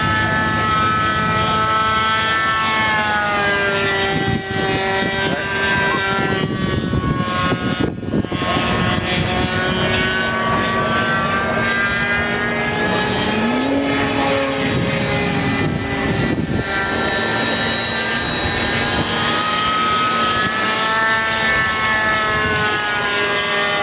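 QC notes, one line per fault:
throughout, gain pumping: input gain likely set far too high, so a fast limiter or compressor clamps down on each loud sound. Level swings by around 10 dB, quieter parts swell and then duck, and loud and soft passages end up squashed together.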